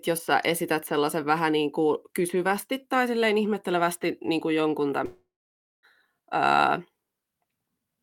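Speech, with one gap just after "ihmettelevästi niin kuin jonkun": from 5.05 to 5.85 s the sound trails off into a fading buzz, then sits in near silence for about 0.55 s before resuming with that stretch lost. Likely a long network dropout that the receiver tried to paper over.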